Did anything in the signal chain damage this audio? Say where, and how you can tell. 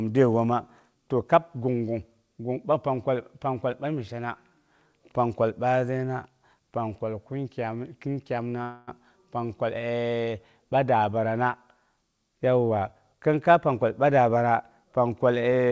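Yes. At 8.62 to 8.89 s the sound holds as a fading buzz or hiss. This is likely a call audio freeze: delayed network packets emptied the jitter buffer, inserting a gap without losing anything.

From 12.69 to 14.98 s the speech hurries at unchanged pitch, about 111% speed. This is a jitter buffer speed-up, with pitch periods trimmed to remove roughly 0.3 s of backlog.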